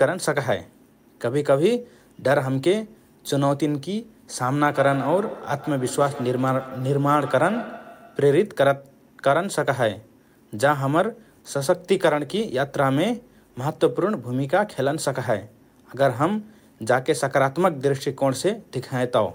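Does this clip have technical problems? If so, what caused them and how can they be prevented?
Yes. Feedback echo between two devices, 4.72 to 8.62 s: a second device replays the speech, repeating roughly every 150 ms at about 14 dB below the voice, each repeat thinner. Prevent it by muting or disconnecting the second device's speaker and microphone.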